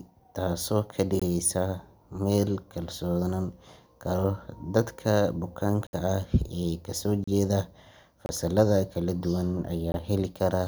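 Brief holes appear in the speech at 1.20–1.22, 5.87–5.93, 7.24–7.28, 8.26–8.29 and 9.92–9.94 s, lasting 21 to 64 ms. These are blocks of digital silence: samples abruptly zeroed, likely by an unfilled output buffer. The 21 ms gaps fit a 1024-sample buffer.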